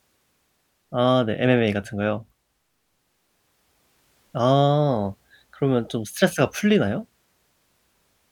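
Nothing stood out as a technical fault anywhere in the recording on listening.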